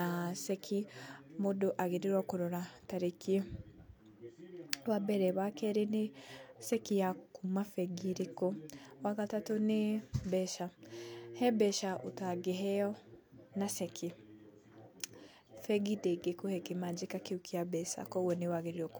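No technical faults are audible.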